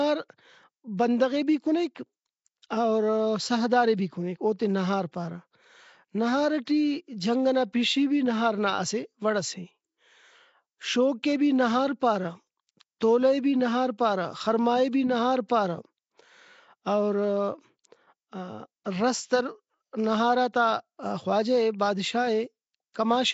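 Speech runs for the whole clip with plainly audible codec damage. A rough, hissy halo sits around the speech and the sound has a smeared, underwater quality, with nothing above 7.7 kHz. This is likely Nellymoser compression, fitting the old Flash microphone codec at about 32 kbps. Weak bands starved of bits are filled with noise. That grainy hiss woven into the speech separates it from low-bitrate MP3, whose damage is warbling, swirly artefacts rather than a noisy halo.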